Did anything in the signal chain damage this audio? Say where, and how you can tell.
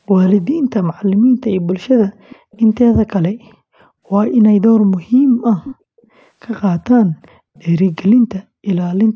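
Yes. Faint copies of the speech trailing 418 ms behind appear at 2.19, 2.52, 3.45, 5.64, 6.02 and 7.54 s: likely echo leak, where far-end loudspeaker sound slipped past the call's echo canceller.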